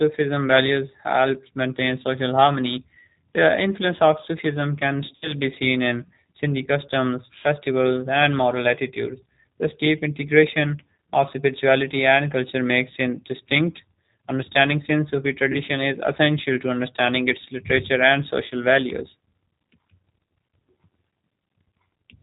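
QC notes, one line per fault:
throughout: G.729 codec. Nothing above 4 kHz is present, and the speech has the slightly rough, synthetic grain of a coder that rebuilds each 10 ms frame from a vocal tract filter, a pitch predictor and a few pulses. That fits the 8 kbit/s G.729A variant, and the damage is plainly audible. Unlike an ordinary narrowband telephone filter, the roughness sits inside the voice itself, not just in the missing top end.
5.16–5.33 s, 15.52–15.60 s, 20.24–20.26 s: VoIP packet loss concealed by the speech codec. About 60 ms of audio is lost at the first point, which fits three 20 ms packets, and about 20 ms is lost at each of the other two. The decoder extends its last pitch and filter at falling gain, so the sound smears into a buzzy tone or coloured noise that fades instead of cutting to silence. The voice stays weak for a short while after each gap before recovering, which separates this from a plain dropout or click.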